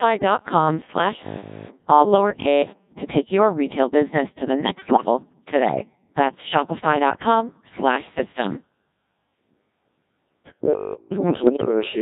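It's a speech clip pushed through the Codec 2 vocoder at about 1.6 kbit/s, and the damage is heavy throughout. Only pitch, voicing, energy and a spectral envelope survive, so the voice comes back rebuilt from sine waves: buzzy, robotic, with none of the original waveform. From 1.21 to 2.91 s, just before "to take your retail", there's a robotic sound from repeated short buffers, likely from audio arriving too slowly. Most of that stretch is filled with loops of the last bit of sound. That sets a rigid 50 Hz metallic buzz, which fits a 20 ms buffer. Then bit errors on digital voice radio hit from 4.64 to 5.05 s, right after "retail business to the", at roughly 7 percent. Each flipped bit scrambles a whole frame's pitch, level or tone, so it breaks into warbles and bleepy gibberish across what sounds like several frames. A shorter burst of the same bit errors hits from 11.44 to 11.68 s, at around 5 percent.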